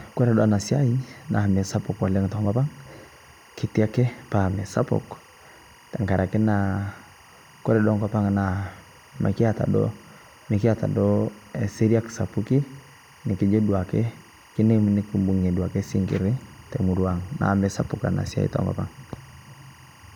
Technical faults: timecode bleed

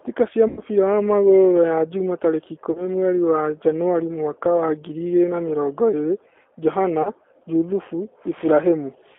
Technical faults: G.729 codec; VoIP packet loss concealed by the speech codec

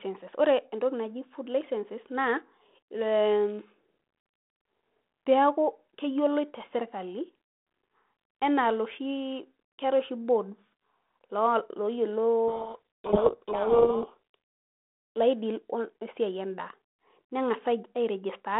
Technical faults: codec payload misread

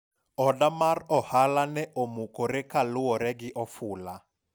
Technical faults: none

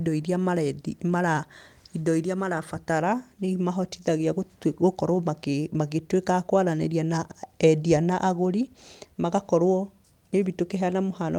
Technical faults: lost packet rebuilt from error correction

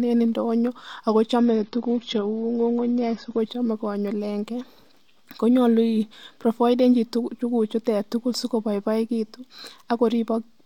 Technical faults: adaptive stream at a lower bitrate

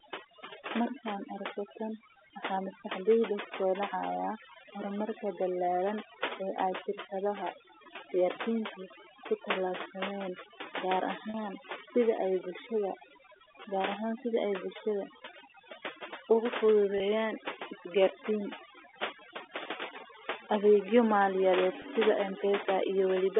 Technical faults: overdone noise removal; packet loss with pitch repetition

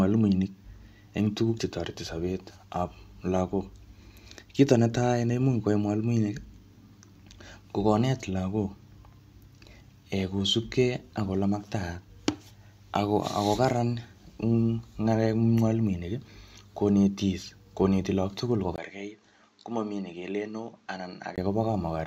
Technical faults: input switched to a poorer device

